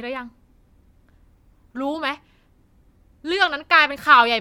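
No technical faults can be heard anywhere in the speech recording, and the signal stays continuous and stable throughout.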